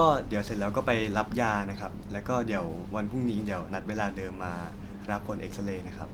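Nothing in this speech recording stood out as a technical problem on listening.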